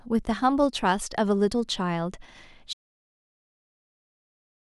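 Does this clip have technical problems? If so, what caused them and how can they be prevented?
Yes. An audio dropout to silence begins at 2.73 s and runs to the end of the clip: the speech stops mid-flow and is replaced by silence, with no room tone or background hiss at all. That silent gap points to the input signal vanishing while recording carried on, most likely a disconnected device, a failed link or an accidental mute. Whatever was spoken after that point was never captured. Securing cables and connections, locking mute controls and monitoring input meters during recording would prevent it.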